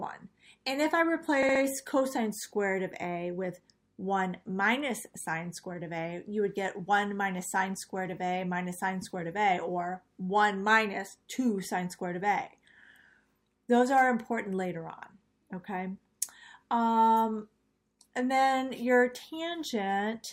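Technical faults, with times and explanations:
1.42 to 1.62 s, repeated frames: the same 64 ms block of compressed audio plays three extra times in a row, so the sound stutters in a quick rhythm of about 16 repeats per second before carrying on. The block length fits two frames of roughly 32 ms each, written or sent more than once and decoded again each time. The stutter adds 192 ms that the original did not have, so everything after 1.62 s plays that much later.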